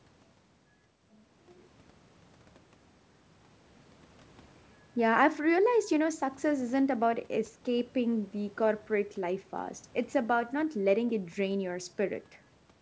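No technical faults can be heard in the speech.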